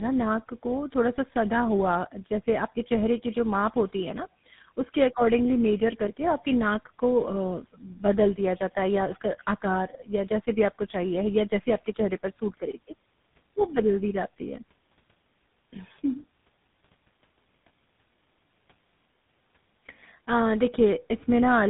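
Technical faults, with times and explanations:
Throughout, tandem speech coding: three speech codecs in a row each re-encode the previous one's damage, leaving rough, warbly, muffled speech with nothing above 3.8 kHz.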